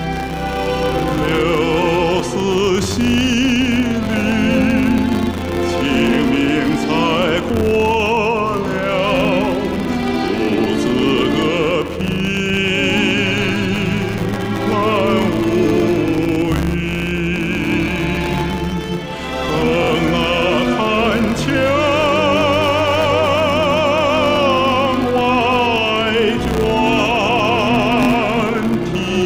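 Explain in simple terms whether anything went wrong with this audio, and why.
A buzz at 100 times per second runs from start to finish. It comes from a filter restarted on every block: the processing forgets its place every hundredth of a second and begins again with a tiny click. Unlike mains hum, this buzz grows and shrinks with the sound's loudness.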